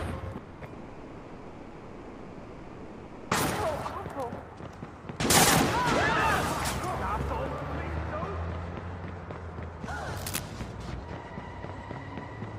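At 0.37 s the sound smears into a buzzing hiss that fades, and the audio resumes at 0.64 s with about 240 ms of material gone. From 0.73 s the same happens for much longer: a fading hiss gives way to a low steady noise until 3.34 s, and about 2.6 s of audio never returns. Both gaps point to a likely long network dropout, with the receiver filling the missing stretch by concealment rather than leaving silence.

From 10.17 to 10.41 s a dense, uneven scratching and rustling rides over the sound, only a little below its level. This is cable scratch noise, likely from a worn cable, connector or control being moved, so that its contact resistance jumps about rapidly and injects bursts of noise into the signal for that quarter of a second.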